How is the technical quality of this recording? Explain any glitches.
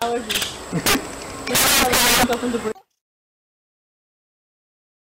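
The recording has a real problem: integer overflow hits three times, from 0.02 to 0.43 s, 0.86 to 0.95 s, and 1.55 to 2.33 s. Whenever peaks push past the top of the integer range, the value wraps around to the opposite extreme instead of being held at the limit. That's harsher than clipping. The first stretch is overdriven by about 4 dB, the second about 10 dB, and the third about 20 dB, so the overload grows each time.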